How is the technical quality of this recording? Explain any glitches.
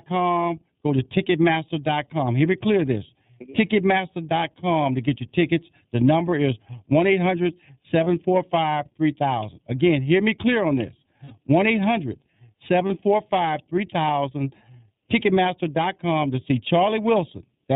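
The recording is clearly degraded. Comb filtering and iLBC coding colour the whole 18-second speech clip, and three brief dropouts are patched over by the codec.

Channel delay (comb filtering) runs throughout. Two versions of the signal, one about 0.4 ms behind the other, were summed to mono, so anything common to both cancels at evenly spaced frequencies. The first notch falls around 1.5 kHz, with more repeating above it. That gives the voice a hollow, phasey colour. On a spectrogram it shows as fixed dark horizontal bands that stay put no matter what is said.

The iLBC codec is also present throughout, and its damage is plainly audible. This narrowband VoIP codec codes each frame's excitation independently, and the sound fits its 13.33 kbps mode with 30 ms frames. Nothing above 4 kHz survives. The speech remains clear but sounds rough and synthetic. A spectrogram shows a hard ceiling at 4 kHz with empty space above, and the harmonics below look grainy and blocky from frame to frame.

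There are three lost iLBC frames. The first is at 8.04 s and lasts about 30 ms. The second runs from 11.25 to 11.34 s, about 60 ms, just after "me clear on this". The third is at 12.87 s, again about 30 ms. The durations point to one, two and one lost frames. At each gap the decoder filled in by repeating the last pitch cycle mixed with noise, so the gap sounds like a held, buzzy or breathy vowel. Because iLBC frames stand alone, the voice recovers at once. In the waveform each gap shows as a run of repeated cycles. On a spectrogram it appears as flat, unchanging harmonic stripes.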